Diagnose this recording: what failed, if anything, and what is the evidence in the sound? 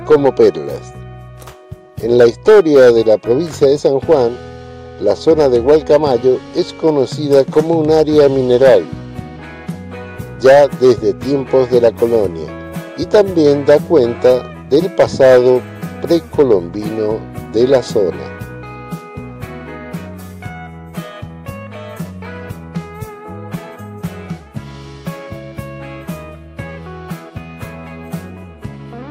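Hard clipping runs through the whole recording. The level was pushed about 6 dB past what a stage could pass, most plausibly the converter input or a fixed-point gain stage, so the loudest peaks are cut flat. Only a small share of samples, around 2 percent, hit the ceiling, so it is heard as crackle on peaks. The waveform shows squared-off, flattened tops, and the spectrogram shows brief vertical smears of high-frequency harmonics at each peak.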